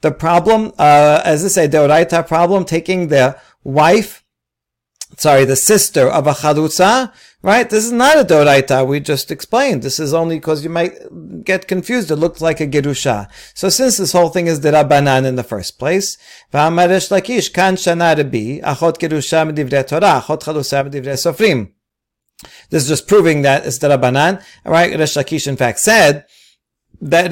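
From 20.81 to 21.14 s the speech drops abruptly by about 6 dB for a third of a second, then snaps back. This is likely one channel dropping out before the mono sum. The waveform shows a sharp-edged step down, and the spectrogram dims evenly across all frequencies.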